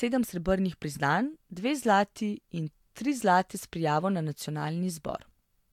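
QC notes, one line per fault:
No faults found in this speech recording.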